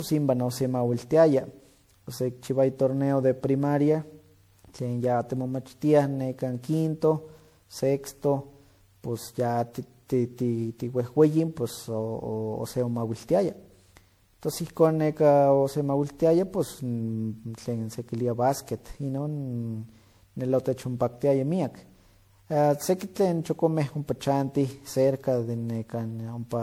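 Speech carrying generation loss throughout: swirly, smeared and hollow, with blurred consonant attacks, likely from around ten repeated MP3 encodes at what sounds like 96 kbit/s. A single encode wouldn't sound this degraded; each pass requantises on a shifted frame grid, compounding holes, though nothing sits above 21 kHz.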